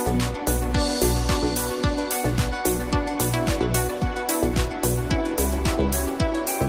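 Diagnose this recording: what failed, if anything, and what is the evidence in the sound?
Nothing failed in this recording, and the sound offers no evidence of a fault.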